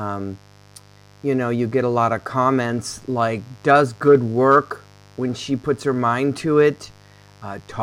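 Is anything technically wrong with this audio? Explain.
Yes. A mains buzz runs through the whole of the speech clip. It is a steady, raspy buzz sitting roughly 30 dB below the speech, built on a 50 Hz mains supply. A dimmer, rectifier or poorly shielded connection injects sharp switching spikes twice per mains cycle, so the interference repeats at 100 Hz and carries a dense series of 50 Hz harmonics reaching up into the kilohertz range. That harmonic content gives the buzz its edge.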